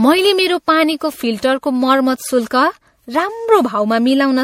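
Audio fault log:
throughout: generation loss. The speech has a swirling, hollow, smeared character, with consonant attacks blurred and nothing above 16.5 kHz. This is likely the result of repeated MP3 re-encoding, roughly seven passes, each quantising on a shifted frame grid so that noise and spectral holes pile up. The band limit fits a 64 kbit/s setting, but a single encode at that rate would not sound this degraded. The excess smearing sets it apart from ordinary low-bitrate coding.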